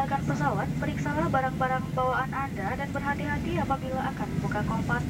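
Throughout the clip the sound carries a grainy distortion that rises and falls with the material itself, sitting roughly 30 dB below the signal. Quiet passages turn gritty and the faintest moments sputter or drop out. The likely cause is low bit depth without dither, here around 7 bits with plain rounding, so the error tracks the waveform. Dithered reduction would instead leave a steady, even hiss that stays put whatever the sound does.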